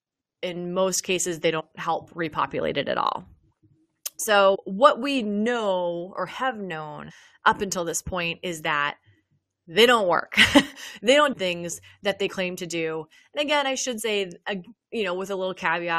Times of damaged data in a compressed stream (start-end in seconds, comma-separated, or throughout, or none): 11.30-11.34